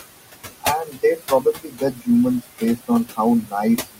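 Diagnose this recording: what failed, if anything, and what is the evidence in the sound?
Noise suppressor artifacts point to the call-processing stage. The room noise, about 11 dB under the speech, is pulled down by about 19 dB between phrases and then rises again beneath them. Because the cut is applied band by band, it differs from a gate's full-band silence.

Speech cut by the noise suppressor comes from the same stage, which mistakes quiet speech for noise at 0.85–2.08 s, 2.41–3.19 s, 3.43–3.54 s and 3.78–3.99 s. There, soft sounds drop by about 15 to 22 dB, most extensively in the first span. They fade rather than vanishing abruptly as with packet loss.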